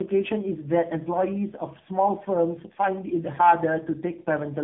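Throughout, the speech sounds rough, muffled and warbly, with nothing above about 3.8 kHz. This is tandem speech coding: the sound points to three speech codecs in a row, likely ADPCM followed by two AMR-NB stages, each re-encoding the previous stage's degraded output.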